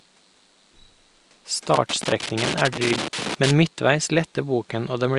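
From 1.74 s to 3.51 s the speech is broken up by loose connector crackle. A worn or dirty contact in the cable or plug is shifting. It keeps losing and regaining contact, so the signal is chopped on and off many times. The result is an irregular scratching burst lasting nearly two seconds. The room noise sits underneath, about 37 dB below the speech.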